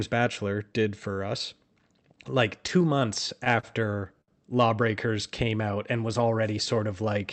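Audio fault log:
2.67 to 3.65 s, repeated stalls (stutter): the speech drags and hitches across this second as packets reach the receiver late, emptying the jitter buffer six times. Each gap is filled by extending the preceding sound, totalling about 88 ms of stretched audio, roughly a tenth of the span, with the longest hold near 33 ms. Because those fills carry on the last sound rather than dropping anything, nothing is lost, yet the flow stutters unevenly.
4.21 to 4.30 s, short stall from a late packet: one packet misses its playout time, the buffer runs dry, and the receiver holds the last sound for about 67 ms until it turns up, resuming exactly where it left off. The result is a single drawn-out moment with a faint buzz or dip rather than a gap, heard against the Opus call path's coding character, whose audible bandwidth is consistent with a cut-off near 8 kHz.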